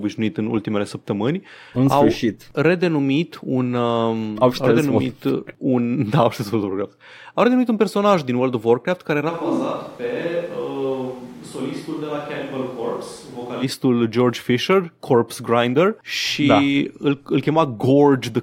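Right after "care era", from 9.31 to 13.62 s, the speech turns abruptly roomy, thin and about 10 dB quieter with more background noise, likely a switch to a distant microphone rather than added reverb.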